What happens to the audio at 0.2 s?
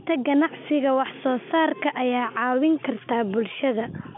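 Nothing goes wrong at 0.2 s: the speech there comes through intact, carried in the narrow telephone band of the G.711 coding with nothing audible above about 3.7 kHz.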